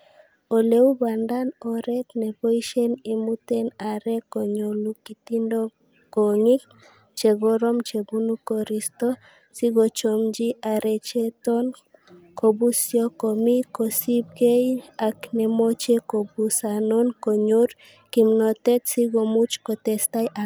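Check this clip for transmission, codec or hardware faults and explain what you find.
No transmission or hardware faults turn up anywhere.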